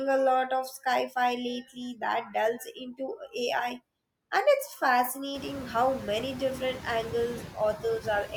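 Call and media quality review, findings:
Noise suppressor artifacts, throughout. The background is pulled down about 19 dB in gaps and rises back under speech. Room noise rises near 5.5 s.

Speech cut by the noise suppressor, 3.17–3.34 s, just before "and it's fascinating how". Speech is misread as noise and dips about 11 dB for roughly 100 ms, sounding swallowed.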